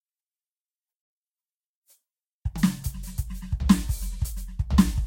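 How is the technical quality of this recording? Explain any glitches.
The quality's fairly rough: the whole music track has generation loss. Throughout, it sounds swirly, smeared and hollow, attacks are blurred, and there's nothing above 16.6 kHz. That's likely from around seven rounds of lossy re-encoding. It fits Vorbis at roughly 45 kbit/s, with each pass requantising on a shifted frame grid so noise and spectral holes pile up.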